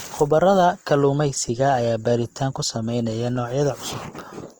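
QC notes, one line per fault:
throughout: Opus compression, speech plainly grainy and rough rather than swirly or muffled, full bandwidth kept; likely noise-filled bands at a rate fitting 24 kbps.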